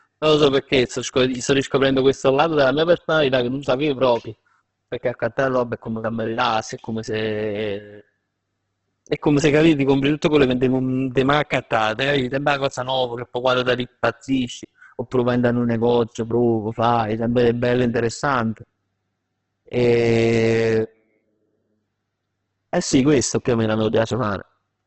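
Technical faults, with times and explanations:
throughout: Opus compression. The speech sounds rough and grainy, with voiced tones turned noisy and nothing above 8.2 kHz. This is likely heavy Opus coding in its music mode, refilling starved bands with folded or noise energy, which fits a bitrate near 12 kbps.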